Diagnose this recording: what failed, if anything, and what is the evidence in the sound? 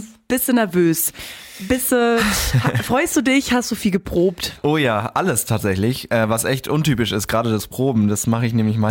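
No fault at any stage.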